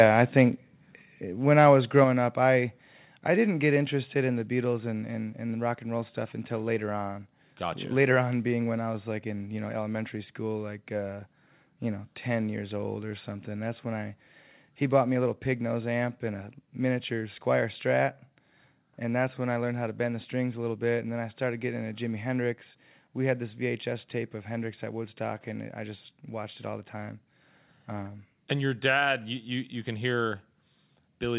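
The speech drops abruptly in level four times: at 1.02 s, right after "I think", by about 3 dB; at 2.04 s, after "when I was", by about 4 dB; at 3.06 s, after "up I", by about 2 dB; and at 18.3 s by about 1 dB. Voice and background fall together in a single step each time. That is the signature of microphone volume stepped down, likely the call software lowering the device's input gain. All of this plays within a band that stops at 4 kHz, consistent with G.711 mu-law telephone coding.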